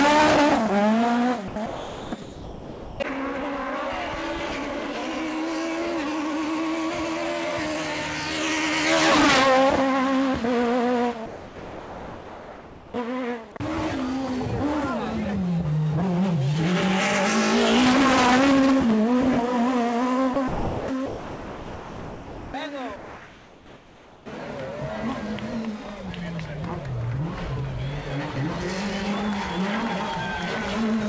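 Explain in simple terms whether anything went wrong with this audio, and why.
Yes, something went wrong. In several places the sound dropped by the voice detector is cut out and replaced by steady hiss, at 1.48–1.56, 1.66–2.12, 2.22–3.00, 11.26–12.94, 20.34–20.36, 20.48–20.88 and 21.06–22.54 s. The likely cause is the sender's detector mistaking real sound for background. Unlike a quiet pause, actual sound disappears.

From 22.96 to 24.26 s there is also comfort noise in place of the background. The real background gives way to a flat, slightly quieter hiss, but no actual sound is lost.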